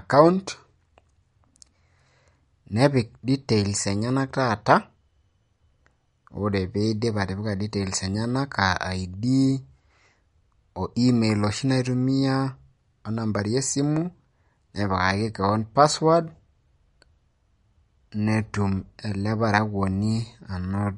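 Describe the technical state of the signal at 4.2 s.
At 4.2 s the speech carries MP3 compression damage that runs through the whole clip. Nothing is audible above 11.2 kHz, and the upper band has a watery, swirling texture as weak frequency lines drop in and out between frames, with s sounds turning chirpy. That combination likely comes from a starved MP3 encoder, fitting a low rate around 48 kbps. A plain low-pass filter would dull the treble cleanly without the shifting, metallic artefacts.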